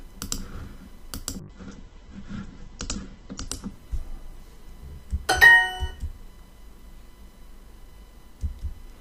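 From 1.4 s to 5.79 s there is a call bitrate drop. The connection's estimated capacity fell, so the encoder had to spend far fewer bits. Coding grows coarse and the top end is cut. Audio bandwidth narrows from 20 kHz to 8 kHz. The sound turns muffled, rough and watery. The worst stretch holds for about 1.8 s, which fits a fall from roughly 96 kbps to near 9 kbps. Quality then recovers by 5.79 s.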